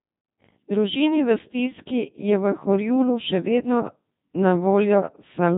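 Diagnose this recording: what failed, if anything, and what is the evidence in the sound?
The codec stage failed: the speech has gone through a Codec 2 vocoder, and it's wrecked from start to finish. The voice is robotic and buzzy throughout, because the decoder only gets pitch, voicing, energy and a rough spectral envelope, then rebuilds everything from sine waves. The original waveform never survives. Nothing sits above 3.6 kHz, and the heavy damage fits a mode of about 2.4 kbit/s.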